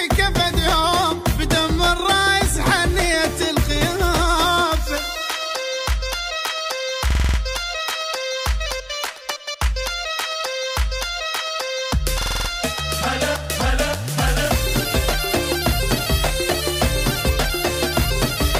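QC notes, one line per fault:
7.11–7.38 s, system hang loop: a 46.44 ms slice repeats six times at 21.5 Hz as a stutter, fitting a 2048-sample buffer. The waveform shows identical blocks, and the spectrogram shows vertical stripes.
12.21–12.49 s, system hang loop: the same six repeats of a 46.44 ms slice at 21.5 Hz. The waveform shows cloned blocks, and the spectrogram shows evenly spaced vertical banding.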